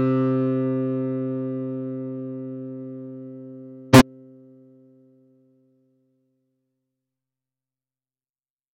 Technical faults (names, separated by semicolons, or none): corrupt frame decoded